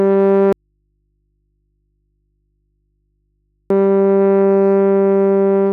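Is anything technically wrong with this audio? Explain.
Yes. The music suffers an audio dropout to a faint residue from 0.53 s to 3.70 s. The signal vanishes abruptly for about 3.2 seconds and returns just as suddenly. This is not a pause or a fade. The gap is not silent. It holds a low mains hum, roughly 55 dB below the music. The likely cause is a broken feed into a path that stayed live, with the open input picking up hum.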